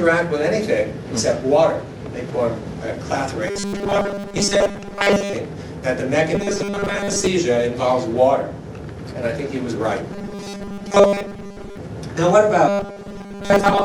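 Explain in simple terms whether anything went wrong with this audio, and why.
Four times the sound turns into a flat, metallic buzz fixed at 200 Hz: robotic sound from repeated short buffers. This happens at 3.48 to 5.33 s, 6.35 to 7.27 s, 10.13 to 11.77 s and 12.68 to 13.84 s. Most of each stretch is replayed fragments, likely because new audio arrived too slowly and 5 ms pieces were repeated.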